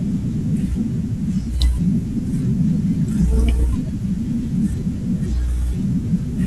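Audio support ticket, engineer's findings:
No faults found in recording.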